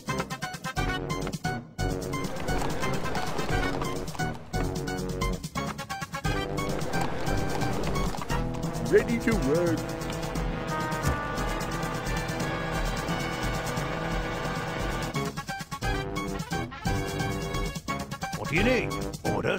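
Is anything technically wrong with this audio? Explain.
Yes. At 6.32 s and 18.40 s the sound briefly jumps ahead by a few milliseconds, likely a dropped buffer (overrun), with unread samples overwritten and the two sides spliced directly. A waveform shows an abrupt discontinuity; a spectrogram, a thin vertical broadband line.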